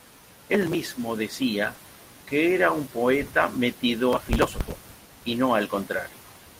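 From 0.54 to 0.75 s, processor overload crackle breaks up the speech: the processor kept missing its deadlines, skipping short buffers of only a few milliseconds, so gritty tearing rides on the sound. The waveform shows rapid hard-edged gaps, and the spectrogram shows thin vertical broadband streaks.

At 1.75 to 1.79 s, a short concealed packet loss leaves a brief smear where about 20 ms never arrived and was filled by extending the preceding sound. The spectrogram shows a blurred patch before the real signal resumes.

From 4.13 to 5.25 s the processor overload crackle returns for over a second, a long stretch of skipped buffers heard as continuous grinding crackle. The spectrogram shows dense vertical striping across all frequencies, and the waveform is riddled with abrupt cuts.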